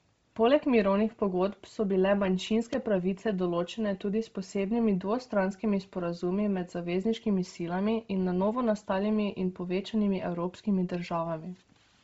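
Throughout, the speech is band-limited with nothing above 7.7 kHz and has a breathy, grainy upper edge, likely from heavy Bluetooth LC3 compression at a low bitrate filling the upper spectrum with noise. From 2.47 to 2.74 s, loose connector crackle: a worn contact making and breaking chops the signal into an irregular scratchy burst.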